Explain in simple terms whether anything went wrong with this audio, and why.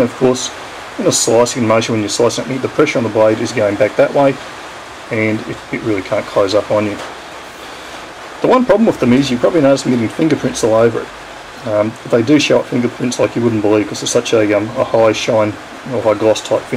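Hard clipping runs through the whole recording. At some point the sound was made louder than the equipment could handle, so the tallest peaks were sliced off flat instead of keeping their natural rounded shape. Only a small fraction of the audio, around one percent, hits that ceiling, so the damage shows up as brief crackle or grit on the loudest moments rather than a constant fuzz. Those flattened tops add a harsh, buzzy edge that wasn't in the original sound.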